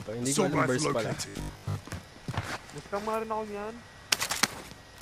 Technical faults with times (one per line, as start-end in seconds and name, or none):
1.29-1.75 robotic sound from repeated short buffers